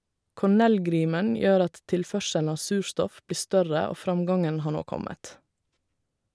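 Nothing in the recording stood out as a technical fault on listening.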